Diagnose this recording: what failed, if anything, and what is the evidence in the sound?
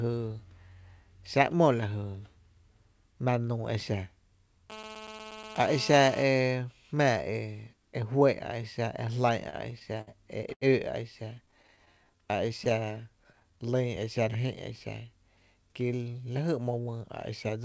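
The GSM phone buzz comes from the analogue wiring. A steady raspy 217 Hz buzz runs from 4.70 to 6.23 s, about 12 dB below the speech. The spectrogram shows a dense comb of 217 Hz harmonics.

Repeated stalls (stutter) come from the network and jitter buffer. Between 9.50 and 10.63 s there are eight stalls, bridged by continuing sound, the longest 88 ms. On the waveform these look like stretched, repeated segments.

Scattered short gaps also come from the network. From 11.25 to 13.43 s there are about fifteen tiny concealed holes, none much over 15 ms. They show as faint smeared vertical seams on the spectrogram.

The jitter buffer slow-down is a buffer-stage fault. From 11.56 to 14.74 s the speech plays at 93% speed with its pitch unchanged, adding 233 ms. The waveform shows near-identical pitch cycles repeated back to back.

The jitter buffer speed-up is also a buffer-stage fault. From 16.65 to 17.64 s the speech runs at 108% speed and sounds hurried, with roughly a tenth of a second cut. 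The waveform shows pitch cycles spliced out.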